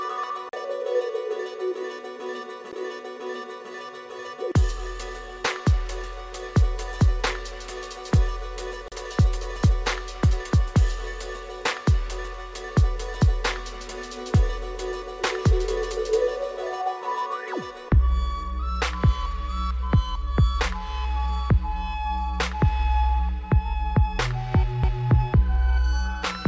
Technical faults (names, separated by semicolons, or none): CD skip